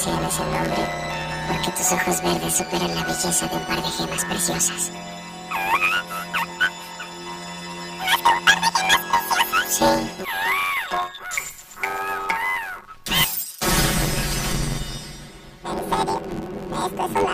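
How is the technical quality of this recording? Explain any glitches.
The technical quality is poor: one fault runs the whole way through.

Planar audio read as interleaved, throughout: each 10.88 ms block stores all left samples, then all right, but is read as alternating pairs, so every block plays twice at double speed. Such short blocks produce a robotic buzz at 91.9 Hz rather than the octave-up flutter that longer blocks would give.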